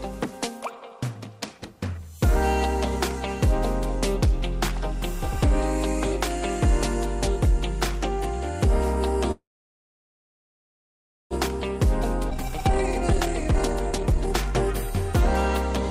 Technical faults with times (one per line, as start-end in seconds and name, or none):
9.31-11.34 call audio freeze
12.30-12.34 skip ahead
12.35-14.82 jitter buffer speed-up